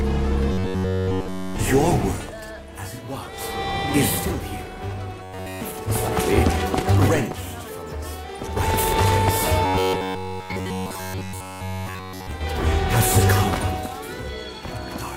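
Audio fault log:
0.52–1.57 s, 5.23–5.61 s, 9.66–12.31 s: robotic sound from repeated short buffers. A rigid 93.8 Hz metallic buzz replaces nearly all the sound, likely from a roughly 10.7 ms buffer being looped.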